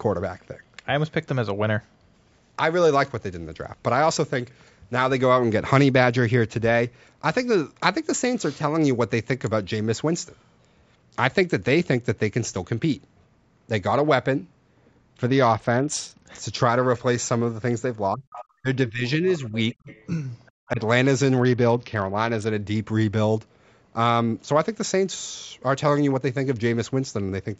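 Speech over a call link, band-limited to 8 kHz by normal microphone processing, has two Bluetooth SBC bit pool drops, at 15.27–16.26 s and 21.37–22.50 s. The treble dulls and gritty noise rises, which fits the bit pool falling from 28 to 8 (around 72 kbps), unlike clean band-limiting. From 18.13 to 19.90 s and at 20.68–20.80 s the speech dips by up to about 35 dB, then about 10 dB, for roughly 0.8 s in total. This is speech suppressed in double talk, likely an echo canceller ducking both voices, so it is not a dropout. The other side's voice leaking through shows up as faint scraps at 18.32–18.45 s (about 15 dB down), 19.07–19.38 s and 19.72–20.06 s (about 30 dB down), and 20.46–20.68 s (about 35 dB down), likely from incomplete echo removal.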